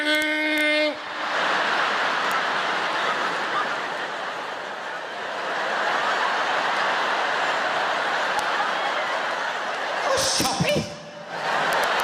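Integer overflow cracks the sound at 0.15–0.22 s, 0.58–0.61 s, 2.32 s, 8.39 s, 10.22–10.69 s and 11.73–12.00 s. Loud peaks exceed the integer limit and wrap to the opposite sign. The longest burst, overdriven by about 2 dB, cracks far more harshly than clipping.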